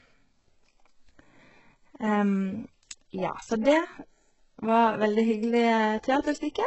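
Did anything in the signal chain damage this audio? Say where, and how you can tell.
Yes, at the codec stage, and it runs through the whole clip. The speech has nothing above 8 kHz, yet the top end still sounds bright in an artificial way, with the s sounds gritty and metallic. That points to heavy damage from likely HE-AAC compression, fitting a very low bitrate of around 8 kbps. The encoder keeps only the lower band and fakes the treble by copying it upward, so those upper harmonics don't match the real ones.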